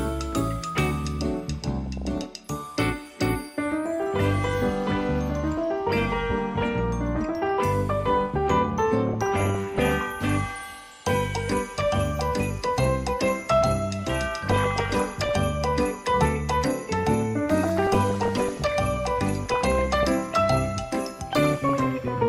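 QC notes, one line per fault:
1.77–2.50 s, 9.07–9.92 s, 14.47–15.29 s, 17.63–18.63 s, 19.41–20.07 s, 21.45–22.08 s: DAB burbling. Bit errors around a few tenths of a percent, near 1% at 14.47 s, corrupt the MP2 samples and scale factors. Individual sub-bands get short blips of noise over the audio.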